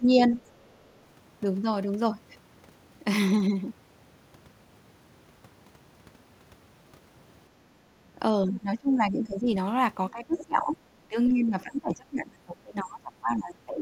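At 0.18 to 0.23 s a brief scrap of a second voice sits roughly 15 dB under the talker, with a much fainter one, some 40 dB down, at 0.45 to 0.5 s. This is the other side's voice leaking through, likely loudspeaker echo the canceller left in the microphone signal. From 8.45 to 9.47 s the talker's level sinks by up to about 15 dB. From 10.11 s to the end it drops harder, by roughly 25 dB, with another leaked fragment around 20 to 30 dB down at 10.35 to 10.44 s. This is speech suppressed in double talk: with both sides speaking, the canceller likely turned down the talker along with the echo.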